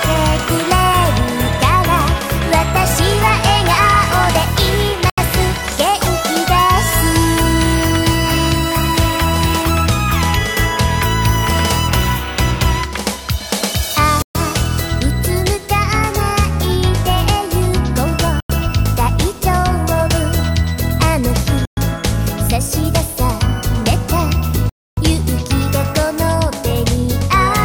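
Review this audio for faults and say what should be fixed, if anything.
The sound cuts to complete silence five times: at 5.10 to 5.18 s (about 80 ms), 14.22 to 14.35 s (127 ms), 18.40 to 18.50 s (93 ms), 21.65 to 21.77 s (118 ms) and 24.69 to 24.97 s (278 ms). These are likely Bluetooth stalls, where radio interference delayed packets, the headphone buffer emptied, and playback waited for retransmissions. Unlike a recording dropout or a codec concealment glitch, each gap is true silence and the audio resumes abruptly, with no fade and no smeared or repeated fragment. Reducing 2.4 GHz interference, keeping the phone closer to the headphones, or using a wired connection should prevent them.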